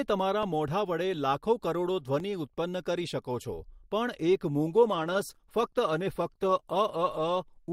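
A block of digital silence hits at 0.43 s and again at 2.20 s. Each lasts about 0.73 ms, which fits a 32-sample buffer left unfilled. The speech drops straight out and back with no fade, so each one is heard as a tick or dip.

An adaptive stream at a lower bitrate takes over at 4.71 s and runs to the end. The connection slowed, so playback switched to a leaner version, consistent with an Opus stream falling from 64 to 16 kbit/s. Codec artefacts grow coarser, and the change is abrupt but leaves no gap.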